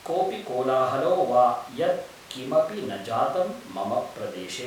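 There are no technical faults to describe in time order in this speech recording.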